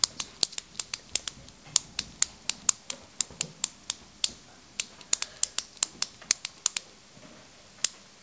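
No faults heard; the audio came over a WebRTC call path with G.722 at 64 kbps, which leaves nothing above 8 kHz.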